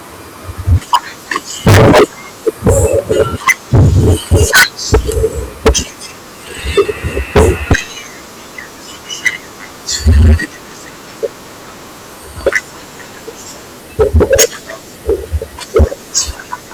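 Speech clip with hard clipping present from start to end. The signal is driven about 48 dB past what the stage can pass, so every peak is sliced flat, and a sizeable share of the waveform, roughly one sample in fourteen, sits pinned at the clipping limit. Those squared-off tops generate dense upper harmonics, heard here as a harsh, continuous fuzz on all voiced and loud passages rather than occasional crackle.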